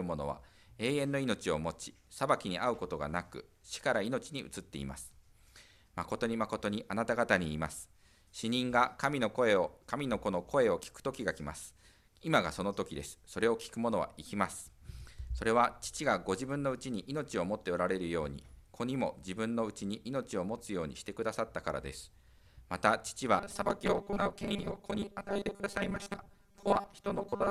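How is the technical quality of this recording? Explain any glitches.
The recording has one clear glitch near the end. From 23.38 s to the end, robotic sound from repeated short buffers sets in: audio likely arrives too slowly, so 5 ms segments repeat, filling about half the time and imposing a rigid, metallic 200 Hz buzz. A spectrogram shows evenly spaced harmonics at 200 Hz multiples; the waveform shows identical, periodically repeating cycles.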